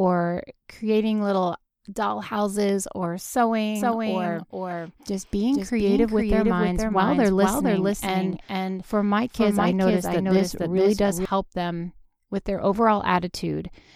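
From 3.75 s, right after "little doll houses or", the speech is shadowed by a second copy of itself about half a second behind and about 5 dB quieter, cleanly full-band with no room tail, until it cuts off abruptly at 11.25 s before "them with their". This doubled audio track is likely the signal being captured a second time through a slower path, or an edit leaving two offset copies.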